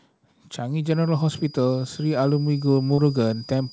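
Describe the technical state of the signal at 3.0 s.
A feedback whistle runs from 0.81 s to the end of the clip. A thin 4.9 kHz tone that swells and fades slowly sits about 25 dB below the speech, likely from the loudspeaker-to-microphone loop hovering at the edge of feedback.

Short concealed packet loss spans 2.94 to 3.00 s. About 40 ms of audio never arrived in time. The receiver filled the gap by extending the preceding sound, heard as a brief smear before the real audio resumes.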